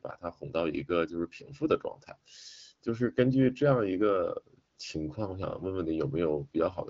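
No technical faults occur anywhere in the speech, so there is nothing to place in time order.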